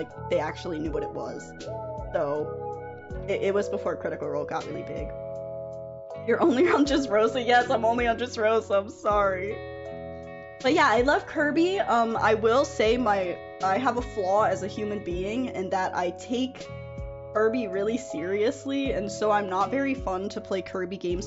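Nothing here calls for a technical complaint; the sound comes across as intact, with nothing in it that a careful listener would flag.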